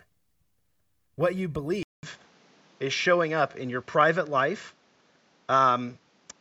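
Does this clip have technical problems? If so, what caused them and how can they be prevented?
Yes. At 1.83 s, a gap of about 200 ms is followed by duller speech with nothing above 7.6 kHz, a modest level shift and a new, faint noise floor lasting to the end. This is most likely an input switched to a poorer device. To prevent it, lock the recording to one microphone and disable automatic input switching.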